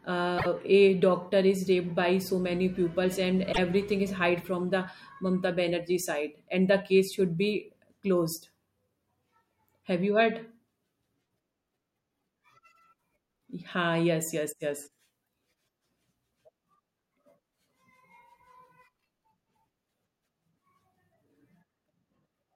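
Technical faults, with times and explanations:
0.37–0.46 s and 3.52–3.58 s, repeated frames: the speech stutters briefly, a tiny slice of sound replaying back to back, three times in all at the first point and twice at the second. The repeated block is 24 ms long, which points to a single compressed frame being written or sent more than once, so the decoder plays it again. That stretches the audio by 48 ms at the first spot and 24 ms at the second.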